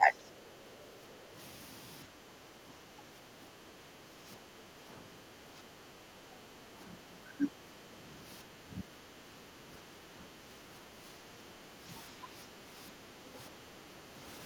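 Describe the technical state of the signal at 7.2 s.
At 7.2 s the speech is inside a span of speech suppressed in double talk, 2.06 to 7.91 s. An echo canceller likely ducked the near talker while both sides spoke, leaving a shallow dip of about 5 dB rather than the full gaps of a dropout.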